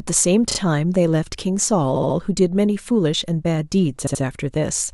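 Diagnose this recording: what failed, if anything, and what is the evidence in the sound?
Compressed frames were written or sent more than once, so the decoder replays short stretches of speech: repeated frames, at the codec or storage stage. Each event is a stutter: a 24.7 ms block played twice more at 0.50–0.57 s, a 69.7 ms block three more times at 1.95–2.16 s, and a 68.2 ms block twice more at 4.06–4.22 s. The repeats add about 0.44 s to the recording.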